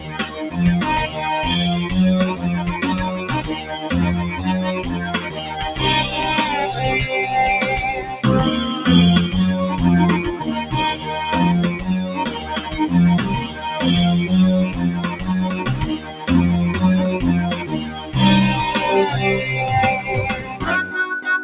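Throughout, a noise suppressor applied to music or sounds treats sustained content as noise, so the level pumps by roughly 10 dB. On a waveform, the envelope visibly breathes, with transients intact and tails shaved.

Sound is cut by the noise suppressor at 0.0–0.58 s, 2.35–5.58 s, 8.01–8.24 s, 10.39–10.73 s, 11.75–13.63 s, 14.71–16.28 s, 17.56–18.15 s and 20.01–20.94 s. Held and decaying parts drop by about 7 to 10 dB, and each of these spans shows as a darkened spectrogram band. Within the G.711-style call band, the spectrogram shows nothing above 4 kHz.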